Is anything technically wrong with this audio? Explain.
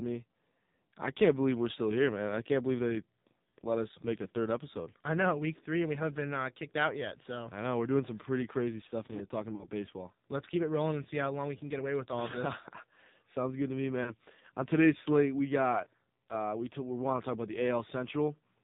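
Yes. Throughout, the speech carries the AMR narrowband mobile codec's sound. Nothing passes above 4 kHz, and the voice is buzzy and synthetic, which points to a very low rate near 6 kbps. A simple low-pass filter would dull the sound without adding this buzz. The buzz comes from the vocal-tract model being driven by too few pulses.

There are lost AMR speech frames at 9.56–9.68 s, 14.04–14.13 s and 15.84–15.87 s. When frames are missing, the decoder repeats its last pitch and tract settings at falling gain. Each spot is a brief smeared warble or dip rather than a hard silent gap or click. The first is longer, which fits two missing 20 ms frames.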